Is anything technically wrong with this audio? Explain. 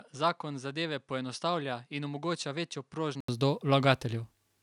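Yes. From 0.0 to 3.28 s the speech sounds dull and about 10 dB quieter, with nothing above 10.5 kHz and a faint new noise floor far below it. An 80 ms gap then precedes fuller sound, most likely an input switched to a poorer device that passes a narrower band.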